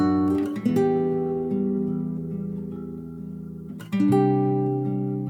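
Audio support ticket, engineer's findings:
No audible faults found: the signal holds steady throughout, with no dropouts, level jumps or added noise heard on review.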